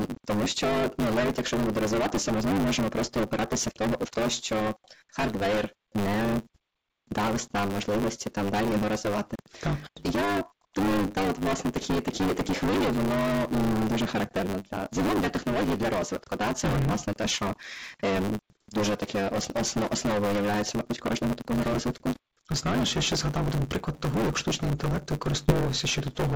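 Right from the start, hard clipping runs through the whole speech: it's driven about 18 dB too hot, so nearly a third of the samples sit flat-topped, giving a harsh fuzz on everything. Also throughout, a block size mismatch (truncated) chops the tail off each block, which fits 512-sample writes. That leaves a steady 100 Hz buzz, and the talk runs 1.16 times fast at roughly normal pitch. At 8.70 to 8.73 s, just after "нам можливості там далі", there's a short concealed packet loss. About 20 ms went missing and got filled in, so you hear a quick smear. The same thing happens again at 25.46 to 25.49 s, another 20 ms patched over with a brief wobble. The G.722 call path underneath shows up as nothing above 8 kHz.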